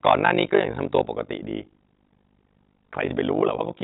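Speech, heard through a narrowband call path with nothing above 4 kHz, carries an overlap-add ripple from start to finish. The level swells and dips around 50 times a second, with a depth of about 60 dB, so the sound takes on a rough, buzzy, robotic tremolo. That pattern comes from frames being windowed and re-summed with an overlap that never adds to a constant gain. On a waveform the envelope is scalloped at that regular frame rate. A spectrogram shows fine vertical banding and sidebands around every harmonic. From 0.06 to 0.58 s, and again from 0.98 to 1.0 s, the loudest moments turn harsh and crackly. The first stretch runs about 6 dB past the converter's limit and the second about 2 dB. Each time, a few percent of samples sit flat against the limit. The likely cause is microphone overload, with the input set too hot for the converter. The waveform shows squared-off, flat-topped peaks, and the spectrogram shows broadband splatter smeared up through the whole band during those spans. 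Right after the second burst, at 1.02 s, the whole signal, background included, drops about 6 dB in a single step. A smaller drop of about 3 dB follows at 3.33 s. These abrupt drops look like a microphone volume stepped down, likely by the call software reacting to a microphone it judged too loud. Each one appears as a sudden, clean shelf in the waveform envelope, and on the spectrogram every frequency darkens at once at a sharp vertical edge. Between 3.06 and 3.10 s there is a brief smear, the sign of short concealed packet loss. About 20 ms of audio failed to arrive, and the receiver invented 19 ms by extending the preceding sound, then blended back into real signal. A spectrogram shows a blurred, overly steady patch of harmonics or noise where the detail should change.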